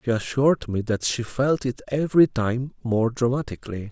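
No technical fault can be heard anywhere in the signal.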